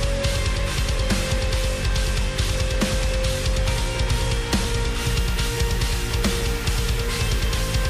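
From 5.01 s to the end, the audio turns grainy, with a gritty distortion riding along with the signal, roughly 20 dB down, and quiet stretches sputtering or dropping out. That points to low bit depth without dither, likely rounding to around 5 bits.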